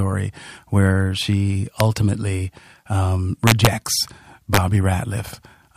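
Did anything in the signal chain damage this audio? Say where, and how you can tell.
Yes: integer overflow at 1.8 s, from 3.47 to 3.67 s, and from 4.54 to 4.57 s, in a digital gain or sample-format conversion stage. On these loud speech peaks the signal was pushed about 1, 2 and 3 dB past full scale, and instead of being limited the integer samples wrapped to the opposite sign. Each peak over the limit jumps across the whole range, producing violent cracks far sharper than ordinary clipping.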